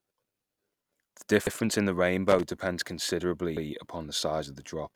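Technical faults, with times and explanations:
1.47–1.57 s and 3.57–3.67 s, overlapping chunks: the audio was handled in 2-second blocks, and each new block began 100 ms before the previous one finished. That 100 ms stretch plays twice at each join, so the sound stutters briefly.
2.28–2.43 s, loose connector crackle: a worn or dirty contact kept making and breaking, chopping the signal on and off for about 0.15 s. Any DC on the line turns those breaks into pops, heard as an irregular scratchy burst.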